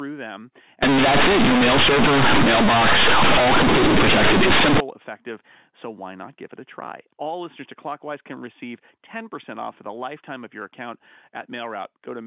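From 0.83 to 4.80 s, ending before "effective so why not", mu-law companded audio read as linear: loud buzzy distortion, noisy pauses, a waveform where quiet sounds are as large as loud ones, and broadband spectrogram smear.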